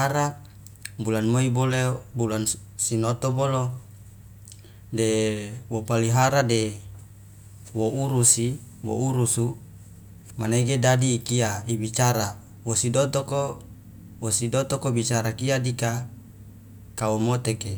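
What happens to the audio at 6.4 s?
Nothing goes wrong at 6.4 s: the speech carries straight through that moment without a dropout, click, glitch or other audible fault.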